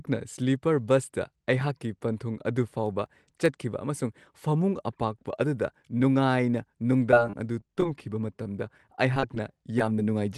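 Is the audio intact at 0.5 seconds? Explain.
Yes, the speech at 0.5 seconds is intact, with no fault at that moment.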